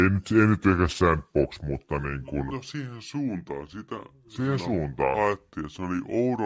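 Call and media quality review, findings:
Wrong sample rate, whole clip. Speech comes out slow and low, running at about 0.73x speed with pitch dropped roughly 5.5 semitones, both shifting together. Points to audio captured around 22 kHz being played out at 16 kHz with no resampling, likely a rate mismatch between the capture stage and the playback stage. Worth checking what rate each end negotiated.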